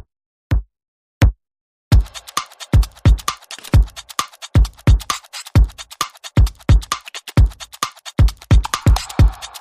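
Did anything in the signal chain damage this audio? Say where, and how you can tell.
Yes, at the codec stage. From about 5.03 to 5.05 s there's a short blip that sits apart from the surrounding sound, peaking somewhere around -30 dBFS. That's a corrupt frame decoded: a single compressed frame had flipped bits, and the decoder played it anyway.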